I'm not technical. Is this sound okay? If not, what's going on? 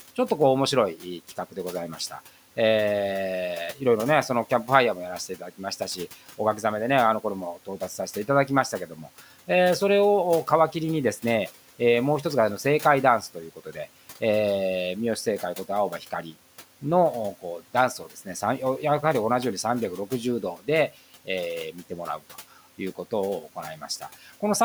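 No. The noise suppressor mistook part of the speech for background noise, so speech is cut by the noise suppressor from 5.29 to 5.61 s and from 8.88 to 9.08 s. In those brief moments the speech sounds swallowed and faint, while the quiet room noise stays in the background.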